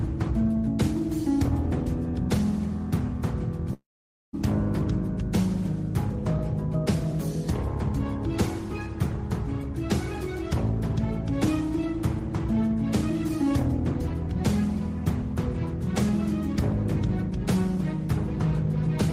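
A long network dropout runs from 3.73 to 4.35 s. The audio trails off as a fading buzz, sinks into about 0.5 s of near-silence, then resumes with 0.6 s gone. This is likely caused by packets ceasing to arrive while the receiver concealed the gap.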